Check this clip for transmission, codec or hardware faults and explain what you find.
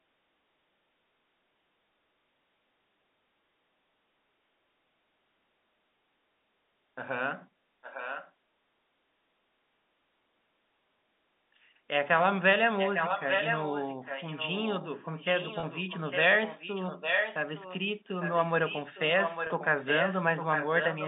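Two faults are audible: echo leak and packet loss with pitch repetition, heard through the narrow telephone band of G.711 coding.

Echo leak, 7.82–8.32, 12.77–16.21, 16.43–17.84, 18.21–19.01 and 19.17 s to the end. A delayed copy of the speech trails 855 ms behind. It is faint in the first and fourth spans and fairly strong in the others. The likely cause is a far-end loudspeaker feeding its microphone past an incomplete echo canceller.

Packet loss with pitch repetition, 15.60–15.63 and 19.47–19.50 s. About 30 ms goes missing each time, which fits a single lost packet. The receiver repeats the last pitch cycle, giving a brief buzzy hold.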